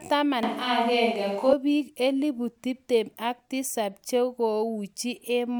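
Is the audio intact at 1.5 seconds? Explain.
No. From 0.43 to 1.53 s there is a switch to a distant microphone, likely because the close microphone dropped out. The speech turns roomy and hollow with thinner bass while the level stays about the same, and room noise sits about 30 dB below. A spectrogram shows weaker low frequencies and smeared reverberant tails, with sharp boundaries at both ends.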